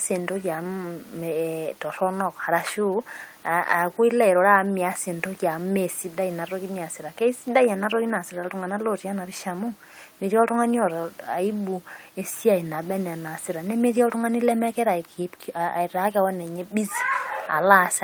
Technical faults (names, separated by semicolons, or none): none